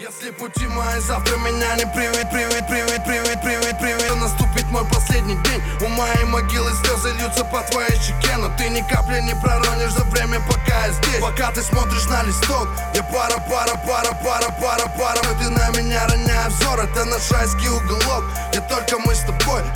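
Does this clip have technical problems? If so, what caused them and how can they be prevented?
Yes. A system hang loop appears at 2.23 to 4.09 s and 13.38 to 15.23 s. The host froze while the device replayed one 0.37 s buffer five times, a 2.69 Hz stutter that fits a 16384-sample ring and loses about two seconds. Prevent it by fixing driver stalls and prioritising the audio thread.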